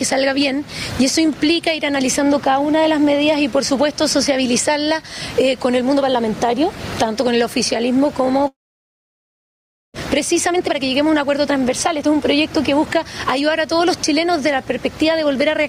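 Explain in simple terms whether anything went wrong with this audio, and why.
Several things went wrong.

Gain pumping runs through the whole clip. The input level was likely set far too high, so an automatic limiter keeps yanking the volume down whenever something loud happens. The volume keeps swinging by a large amount, which leaves loud and soft parts closer together and everything squashed.

A long network dropout happens from 8.47 to 9.98 s. Audio likely stopped arriving, so the receiver briefly stretched the last sound into a fading buzz or hiss, then fell silent for most of that stretch. About a second of the original audio is simply gone when sound returns.

A jitter buffer speed-up follows from 10.2 to 13.98 s. After the gap, the receiver was holding roughly half a second too much audio, so it trimmed out many tiny slices to catch up. The sound plays about 12% faster at unchanged pitch and feels rushed.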